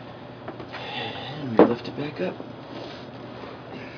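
No technical faults can be heard anywhere here.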